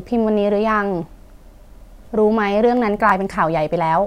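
At 3.09 to 3.12 s the speech hits a brief Bluetooth stutter. About 20 ms of audio went missing, which fits a single lost packet, and the receiver replayed its last slice rather than falling silent. The sound resumes as if it had played on, unlike a gap that pauses and delays the sound.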